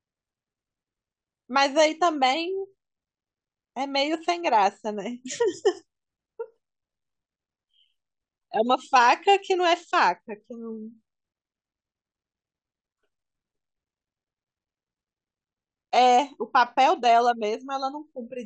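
Speech, with nothing technically wrong with it.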